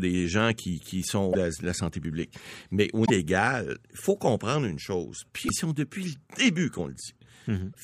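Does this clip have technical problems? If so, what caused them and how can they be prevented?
Yes. Damaged data in a compressed stream causes four brief glitches in this speech: 1.29–1.35 s, just before "la santé"; 3.02–3.10 s; 5.45–5.50 s, right after "faut comprendre une chose"; and 7.72–7.75 s. At each spot, corrupted bytes make the decoder misread frames and lose sync until it finds the next valid header, producing a 25–80 ms glitch. Transferring files with checksums and using a transport with error detection would prevent it.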